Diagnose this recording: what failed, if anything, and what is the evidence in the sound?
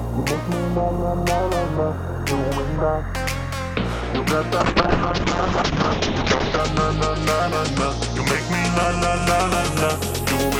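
A call bitrate drop at the codec stage runs from 4.62 to 6.66 s. The band collapses from 20 kHz to 8 kHz and the sound turns coarse and muffled, which fits the encoder falling from roughly 128 kbps to about 7 kbps after the bandwidth estimate fell.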